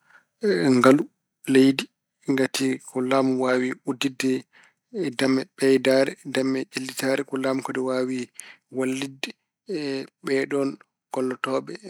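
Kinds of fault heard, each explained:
Microphone overload: The loudest speech peaks here are flattened at the converter's ceiling. The input level was likely set too high, pushing peaks about 2 dB past full scale. From 0.83 to 0.91 s, the tops of the waveform are sheared off. About one sample in twenty hits that limit. The result is a brief, harsh crackle on the syllable. The tone turns buzzy and grainy for that short stretch.
Microphone volume stepped down: At 1.02 s the whole signal drops by about 3 dB in a single step. The speech and the background fall together. This was likely the call software reacting to the distorted peak just before by cutting the device's input gain. The change is instant, not a gradual fade. Everything from "leydi ngati ko laamu" onward sits lower than what came before.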